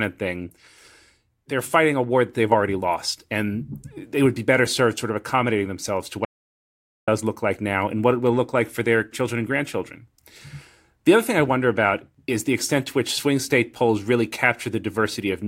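At 6.25 s, right after "of accommodating themselves to", the speech cuts off abruptly and the track falls into dead digital silence, with no room tone at all, until it resumes mid-flow at 7.08 s on "look like now and". This is an audio dropout to silence lasting about 0.83 s, and whatever was spoken in that gap is lost. The likely cause is a momentary loss of input, such as a link failure or brief mute, while recording continued writing silence.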